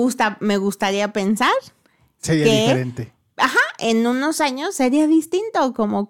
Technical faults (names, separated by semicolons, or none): none